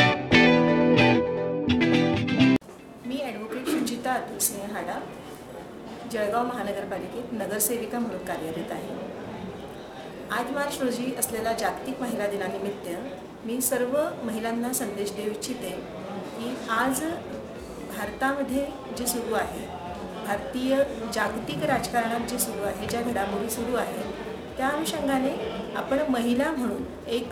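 A rough, metallic edge rides on every sound for the whole clip and vanishes in silence: periodic clock jitter, with sidebands spaced about 2 kHz from each component.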